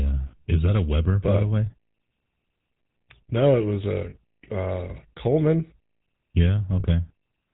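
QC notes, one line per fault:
Throughout, GSM full-rate codec: a plainly audible buzzy, gravelly roughness and nothing above 4 kHz, consistent with 13 kbps full-rate coding of pulse-driven vocal-tract models.
1.66–1.71 s, 4.10–4.16 s and 6.80–6.85 s, lost GSM frames: each gap of about 40 ms is filled by repeating the last good frame, giving a brief metallic ring.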